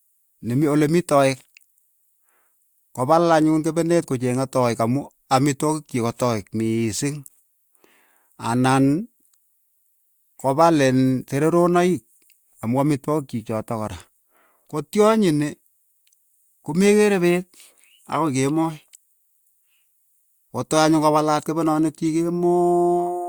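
At 22.05 to 22.07 s, just after "kopalaat kepenoniik", a corrupt frame was decoded: flipped bits in what sounds like a single compressed frame were played anyway, misplacing energy across frequencies. The result is a brief chirp-like blip in the speech, peaking around -25 dBFS.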